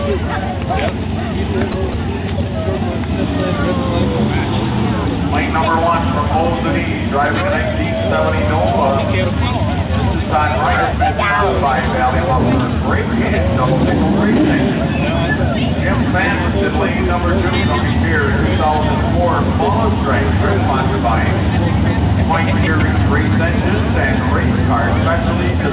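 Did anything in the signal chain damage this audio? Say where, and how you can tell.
Yes. Sound dropped by the voice detector at 1.72 s and 1.92 s: two 20 ms patches of steady noise, likely call processing mistaking sound for background and substituting comfort noise.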